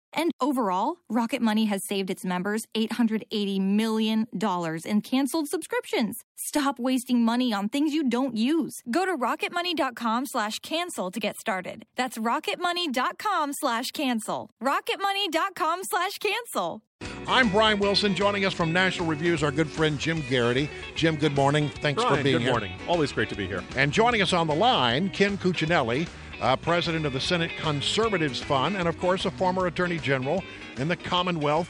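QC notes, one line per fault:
No faults found in this clip.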